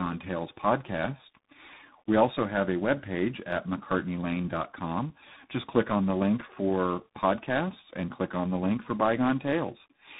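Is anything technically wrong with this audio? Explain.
Yes. Throughout the speech there is tandem speech coding: the audio sounds as if it was decoded and re-encoded by about three different speech coders in a row. The sequence points to iLBC, then G.726, then a final CVSD stage, with plain telephone-grade links between them. Each coder re-models the errors left by the previous one, so the roughness, muffling and warble compound. Nothing comes through above 3.8 kHz. A single low-rate codec would give one consistent kind of artefact. Here a gritty CVSD hiss is layered over a smeared, warbling texture.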